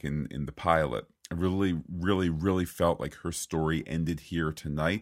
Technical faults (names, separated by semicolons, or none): none